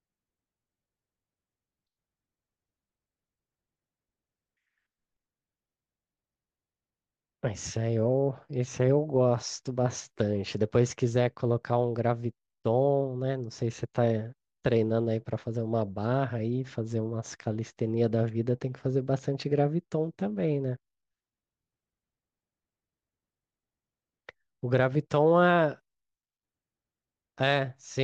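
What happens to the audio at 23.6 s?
Nothing goes wrong at 23.6 s: the speech carries on intact through that moment, with no dropout, click or distortion.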